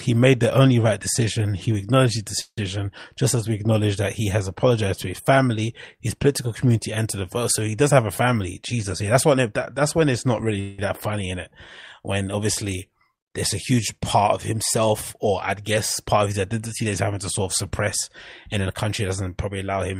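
At 2.41 s there's a call audio freeze lasting about 0.16 s. The last sound gets stretched into a fading buzz or hiss that ends in roughly 60 ms of silence. That's likely packets arriving late and the jitter buffer running dry. Nothing is lost, since the audio just resumes later. From 8.56 to 9.49 s you get a jitter buffer speed-up. The receiver trims pitch-period slices to shed about 70 ms of backlog, so things run around 8% faster at unchanged pitch. A second freeze at 10.60 s fills about 0.18 s, fading but never reaching silence. From 18.56 s to the end, another speed-up runs about 9% faster and cuts roughly 150 ms, which sounds noticeably rushed.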